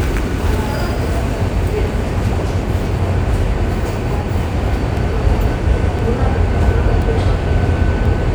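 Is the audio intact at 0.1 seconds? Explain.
Yes, the audio is intact at 0.1 s, with no fault audible at that moment.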